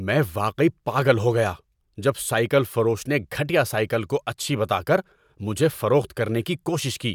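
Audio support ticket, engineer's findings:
No faults found in playback.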